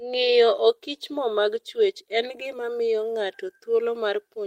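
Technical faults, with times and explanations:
Nothing technical goes wrong anywhere in this speech recording, so there's no fault to list.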